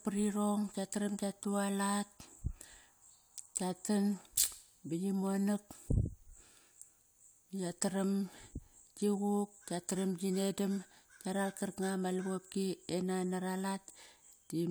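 Nothing in the recording stood out as a technical fault on listening.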